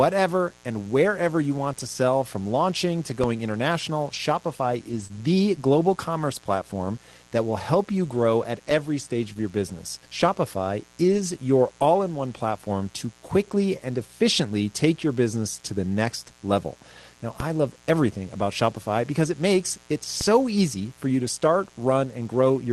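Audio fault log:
throughout: mains buzz. A steady, raspy buzz sits under the speech for the whole clip, roughly 30 dB below it. Its fundamental is 60 Hz, but it sounds harsh rather than like a smooth hum. That is because sharp switching spikes from a dimmer, rectifier or unshielded input arrive twice per mains cycle. Those spikes carry harmonics of 60 Hz well up into the kilohertz range, which gives the buzz its edge.
3.24–17.40 s and 20.21 s to end: DC step. The waveform's zero line jumps at 3.24 s, just after "sell from launching to", holds offset, then steps back at 17.40 s, just before "I love everything about". It jumps again at 20.21 s and stays offset to the end. Each edge is heard as a low thump or click, while the speech carries on unchanged, as when an offset input is switched in or a converter recalibrates.
4.91–5.05, 5.11–5.17, 9.38–9.44, 11.08–11.22 and 19.54–19.56 s: lost packet rebuilt from error correction. 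No gap is heard at these points. Instead the sound turns briefly rougher and noisier for spans of 80, 40, 40, 80 and 20 ms, the last just after "because it". The decoder played low-bitrate Opus in-band FEC copies carried in the following packets. The spans fit runs of 20 ms packets. The call path points to about 24 kbps with a 12 kHz cut-off.
5.07–5.11 and 9.33–9.38 s: short concealed packet loss. About 20 ms of audio never arrived in time at each point. The receiver filled the hole by extending the preceding sound, pitched if voiced and as shaped noise if not, then cross-faded back into real audio. Each is heard as a brief smear or wobble. Both sit directly before a rebuilt stretch, so the disturbance runs on slightly past the fill.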